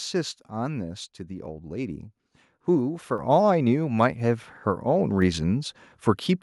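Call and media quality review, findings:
Microphone volume stepped up at 3.18 s: speech and background jump about 4 dB together. Capture-side auto gain raised input level once; waveform envelope steps up, spectrogram brightens uniformly across bands.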